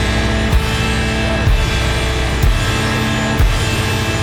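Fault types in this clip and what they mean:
Clock drift buffer slips: about four short clicks or pops come at a steady 1.06 s spacing, from 0.85 s to 4.02 s, each a jump in the waveform. The likely cause is two devices running on separate clocks that disagree by several hundred parts per million, so the buffer between them slowly drifts until a small block of a few dozen samples is dropped or repeated. The buffer level then resets and the cycle starts again.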